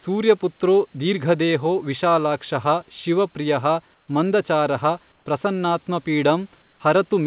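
Comfort noise in place of the background at 3.94–4.08, 5.12–5.26 and 6.62–6.80 s in this speech: during short pauses the room's real background drops out, replaced by steady, featureless noise about 3 dB quieter, likely from discontinuous transmission with synthetic noise filling silent gaps.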